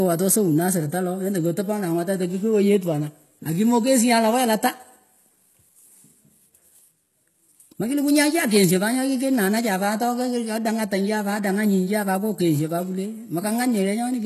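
From start to finish, the speech has nothing above 12.3 kHz, and its sibilants sound gritty and metallic. The upper band seems rebuilt from copied lower bands, not coded directly. This is likely HE-AAC compression, pointing to a very low bitrate near 16 kbps.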